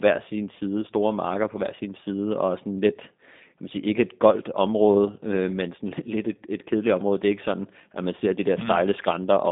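Speech throughout sounds rough, buzzy and slightly synthetic, squeezed into a 200 Hz to 3.7 kHz band: the G.729 codec rebuilding the voice from a compact parametric model at what sounds like 8 kbit/s.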